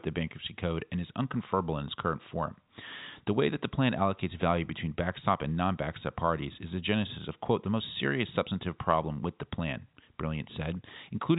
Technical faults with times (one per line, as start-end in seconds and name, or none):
none